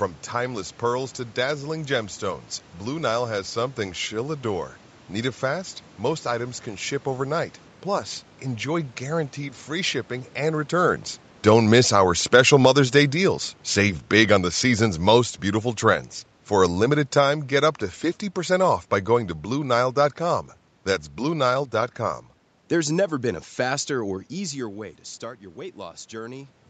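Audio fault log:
11.43–17.82 s, automatic gain falling: just after "free shipping and returns" the speech sinks steadily over about six seconds and ends about 8 dB lower, with the room noise sinking right along with it. That shared drop gives it away. The automatic gain control judged the input too loud or its background noise too strong and eased its gain down gradually, turning down the whole signal, background included, rather than the talker simply moving away.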